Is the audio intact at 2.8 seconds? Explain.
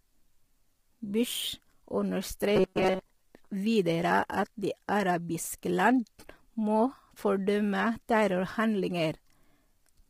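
No. From 2.56 to 3.00 s the speech breaks into robotic sound from repeated short buffers: a rigid, metallic buzz at 188 Hz that only loosely tracks the syllables. The likely cause is audio arriving too seldom, so the playback side keeps re-issuing its last short block while most of the real audio in that span is skipped. A repeat every 5.3 ms gives that 188 Hz buzz. On a spectrogram this shows as evenly spaced horizontal lines at 188 Hz and its multiples, replacing the natural harmonics; the waveform shows an identical short cycle tiled over and over.

Underneath, and running through the whole clip, is heavy low-delay AAC compression, likely AAC-ELD at a low bitrate around 24 kbps. Its short frames resolve pitch harmonics poorly, so the voice sounds rough and grainy. A spectrogram shows noise filling the gaps between harmonic lines and a smeared, synthetic-looking top band.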